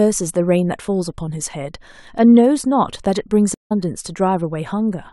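A stream reconnect occurs at 3.54 s. The connection dropped, so the player fell silent for 164 ms until 3.72 s, then re-established the link and started a new decoder partway through the live stream. Because the stream kept running during the gap, the speech does not pick up where it stopped. It resumes roughly a fifth of a second further on, so a short stretch is simply missing after the dropout.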